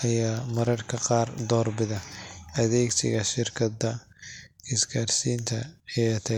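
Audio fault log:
No technical faults can be heard anywhere in the signal, which holds a steady level and continuous playback throughout.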